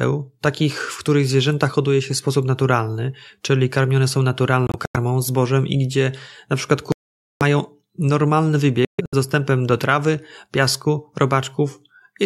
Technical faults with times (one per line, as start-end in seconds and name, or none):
4.67-4.96 Bluetooth dropout
6.92-7.43 Bluetooth dropout
8.85-9.15 Bluetooth dropout